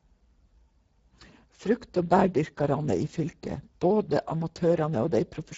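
From start to finish the speech carries Speex codec damage, and it is plainly audible. Speex is a CELP coder that models the voice and spends only a few bits on the excitation signal. Here the coarseness fits a bitrate near 10 kbps, leaving the speech noisy and hoarse. On a spectrogram the energy stops abruptly at 7.7 kHz, and the harmonic bands below look grainy and smeared rather than cleanly striated.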